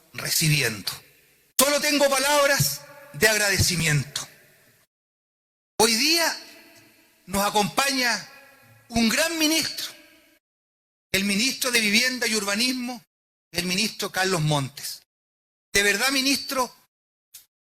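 Tiny skips in the sound land at 1.81, 3.80, 7.79, 9.77, 11.76, 13.74 and 15.73 s, falling on a 2-second grid. This is overlap between stream segments. Adjacent 2.0 s segments carry overlapping time stamps, so the player trims the shared span even though that audio was never duplicated. Roughly 4 to 16 ms disappears at each of these points, and the waveform jumps across the gap.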